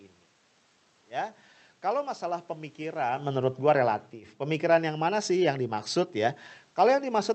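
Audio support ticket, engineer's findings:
Automatic gain falling, 4.57 s to end of clip. AGC reduces gain gradually after too-loud input or strong background noise, so speech and room noise sink together. The level shift near 3 s affects only the voice, from the talker moving, not the gain stage.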